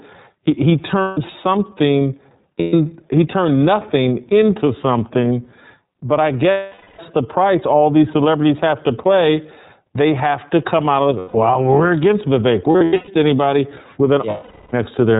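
The whole recording passes through the iLBC codec, and its 30 ms frame structure points to the 13.33 kbps mode. Each frame's excitation is coded on its own, and everything above 4 kHz is cut away. The result is plainly audible: the speech sounds narrowband, muffled at the top, and slightly rough and synthetic throughout.

On top of that come lost iLBC frames, where packets never reached the decoder. For each gap it repeated the last pitch cycle blended with noise, fading it as the loss stretched on. At 1.02 s, 150 ms goes missing and becomes a short, held, buzzy vowel. At 2.60 s, 120 ms is lost the same way. At 6.51 s the longest gap, 480 ms, starts as a drawn-out tone and fades as it goes on. At 11.18 s, 150 ms is lost. From 12.71 to 13.09 s the losses are scattered, 270 ms in all, with no single run much longer than a tenth of a second, so the sound stutters with brief buzzy patches. 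At 14.30 s, 420 ms is lost as a long, fading held sound. Each time, the speech snaps back almost immediately.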